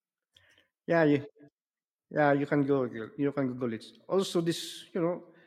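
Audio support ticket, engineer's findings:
No audible fault found on the speech recording; nothing to attribute to any component in the capture or playback chain.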